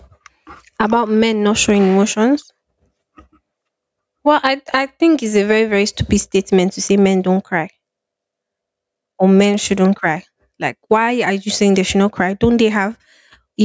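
Speech runs through the whole clip with gain pumping. The gain swings by something like 15 dB. That points to input gain set far too high, with a fast limiter or compressor likely clamping down on each peak, so loud and soft passages sit squashed together. A noise gate would cut the gaps to silence instead of letting the noise swell up in them. The call microphone processing removes the deepest bass and leaves nothing above 8 kHz.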